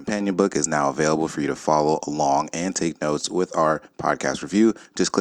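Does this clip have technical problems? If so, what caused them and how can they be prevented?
No, the speech signal comes through intact, with nothing in it that points to a problem in recording, processing or playback, so there is nothing here that needs preventing.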